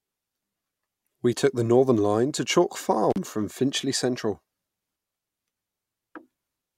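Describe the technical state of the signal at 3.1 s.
The speech cuts out with crackle at the edges from 3.10 to 3.18 s, leaving faint hiss: an intermittent contact, where a loose connection opens for about 35 ms.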